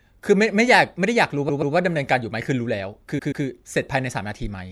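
At 1.48 s the speech stutters. A short block of about 0.13 s plays twice more, to 1.74 s. These are repeated frames. Part of the compressed stream was sent or stored again, so the decoder played the same stretch three times in all. The block length fits a run of about five frames. The same stutter returns from 3.18 to 3.44 s. Each repeat adds about 0.26 s to the audio.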